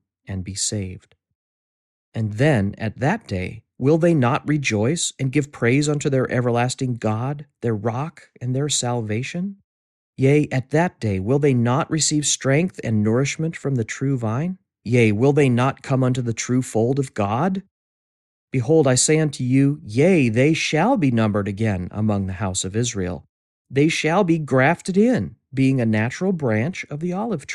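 Listening to this speech recording, nothing stood out as a technical problem at any point.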